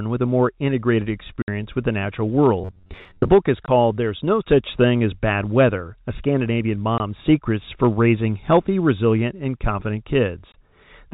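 At 1.42 to 1.48 s, between "with a more integrated" and "with the natural", packet loss filled with silence cuts a 60 ms hole with hard edges. Its length points to three 20 ms packets. Unlike concealment, nothing replaces the missing audio. It is simply absent.

From 2.61 to 3.30 s, just after "with the natural", the sound becomes a rigid metallic buzz at about 93.8 Hz. This is robotic sound from repeated short buffers, likely caused by starved playback looping a roughly 10.7 ms buffer, with about half the audio repeated rather than new. It keeps going instead of leaving gaps.

Further single-packet losses, each 20 ms of silence, fall at 3.66 to 3.68 s, 6.98 to 7.00 s and 10.52 to 10.54 s, all within the narrowband G.711 telephone coding.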